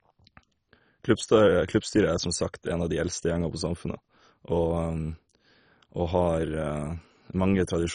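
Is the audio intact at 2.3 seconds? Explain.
No. At 2.3 seconds, as throughout the speech, the sound is dull and gurgling, with nothing above 10.4 kHz, likely from heavy MP2 compression at a very low bitrate, around 32 kbps. Starved sub-bands switch off and flicker, and the remaining ones are coarsely quantised. This granular grit sets it apart from a plain low-pass filter.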